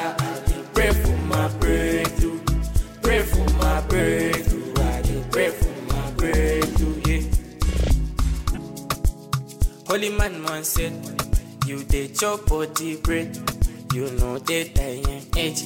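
At 8.54 to 8.58 s there is a corrupt frame decoded. It lasts about 40 ms. That span fits a single damaged compressed frame. Some of its bits were flipped in storage or transmission. The decoder did not reject it and played it anyway. Misread codes and gains put energy at the wrong frequencies. The result is a short chirp, squeak, blip or burst of noise that does not belong to the sound. It peaks at about -15 dBFS.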